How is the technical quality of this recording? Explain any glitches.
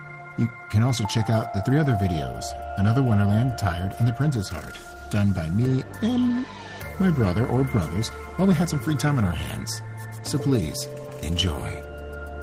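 The recording has a steady timing fault. Small hiccups run through almost the whole clip.

Clock drift between sender and receiver affects the entire recording. The sender's audio clock runs roughly 4 percent fast relative to the receiver's. Samples therefore arrive a little quicker than they are played out. The jitter buffer keeps filling instead of holding steady. The receiver has to shed material to keep up. The result is an unsteady tempo and faint stumbles scattered across the sound.

Repeated timing corrections begin at 0.19 s and continue to the end. To stay in step, the receiver keeps trimming short pieces out of the stream. The overall rate works out to about 104 percent of normal speed. The cuts all go the same way, but they are unevenly spaced. Each one is small. They come across as slight skips or a rushed, uneven pace.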